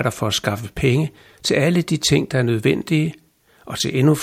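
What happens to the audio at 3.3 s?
Nothing goes wrong at 3.3 s: the speech plays through that moment intact, with no dropout, click or distortion.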